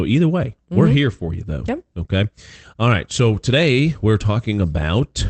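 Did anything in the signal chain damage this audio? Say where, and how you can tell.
No, nothing in the chain damaged this speech: it came over a WebRTC call path that was working normally, and the top end stops near 8 kHz, which is what a low-bitrate Opus call would be expected to give.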